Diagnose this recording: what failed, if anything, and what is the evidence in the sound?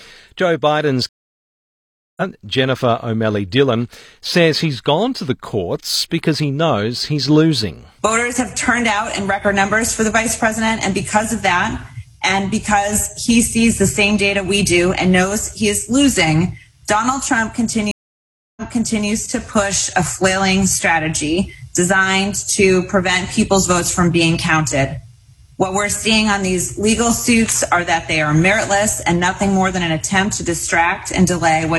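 Two stream reconnects point to the network and playback stage. At 1.09 s the sound goes silent for about 1.08 s and comes back at 2.22 s roughly a second further along, so material is skipped. At 17.91 s a 0.65 s silence ends at 19.08 s with the sound resuming 0.51 s earlier, so a stretch repeats. A plain dropout would leave a gap with continuous material on either side. Here the jumped timeline shows the player lost the connection and restarted decoding at a different point.

Mains hum points to the analogue wiring. From 26.76 s to 29.33 s a steady 60 Hz tone sits about 20 dB below the signal. A ground loop or a nearby transformer is leaking the power-line frequency into the audio path. It differs from a low tone in the material itself because it stays fixed exactly at the 60 Hz grid frequency, with no change in pitch or level, and begins and ends independently of the surrounding sound.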